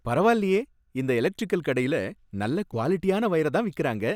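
A short chirpy burst of misplaced energy, peaking at about -30 dBFS, cuts into the speech at 2.72 to 2.75 s, right after "இந்த எலக்டிரிக்கல் கடையில நல்ல". It is a corrupt frame decoded: flipped bits in a few compressed frames were played anyway, scattering energy to wrong frequencies.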